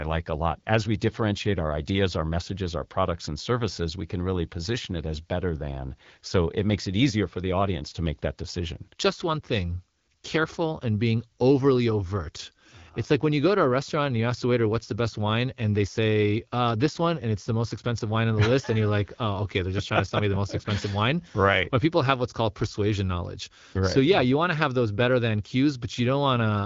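No technical faults are present.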